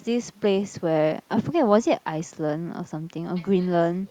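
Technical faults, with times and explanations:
Nothing technical stands out in this bit of speech; there's no fault to point to anywhere along the way.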